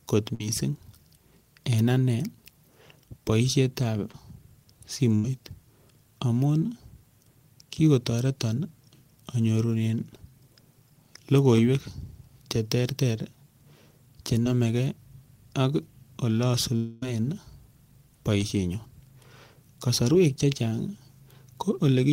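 Burst of packet loss at 0.34–0.41 s and 5.15–5.25 s in this speech: consecutive packets went missing, about 50 and 80 ms, so the receiver stretched and faded the last sound before resuming later. Short concealed packet loss at 4.12–4.14 s, 11.56 s, 14.44–14.46 s and 18.41–18.43 s: 10 to 20 ms never arrived in time, leaving brief smears or wobbles where the decoder bridged the hole. A long network dropout at 16.76–17.03 s is the likely cause of a quarter-second fading buzz or hiss that fills the whole gap without falling silent before the audio returns further on.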